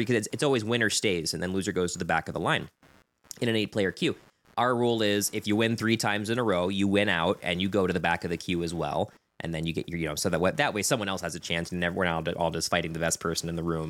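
From start to finish there's computer activity noise under the speech: a faint buzzy chirp pulsing around a hundred times a second, sitting well below the talking. It's processor or graphics load shifting the shared ground the audio circuit rides on, so it tracks the machine's activity, not the speech.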